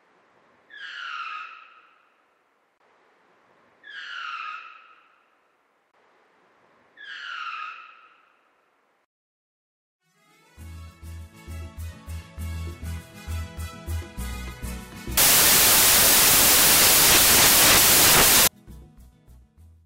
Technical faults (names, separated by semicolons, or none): samples built from the wrong bytes